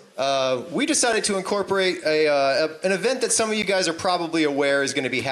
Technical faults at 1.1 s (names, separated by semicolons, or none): block of digital silence